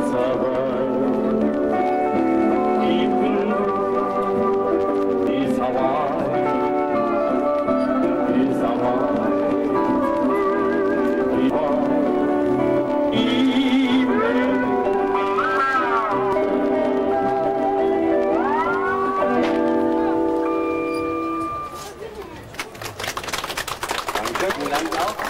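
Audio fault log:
5.27, 11.50, 16.33 and 24.50 s: damaged data in a compressed stream. Each is a momentary chirp, squawk, click or short hole as the decoder misreads corrupted frames and resyncs at the next header.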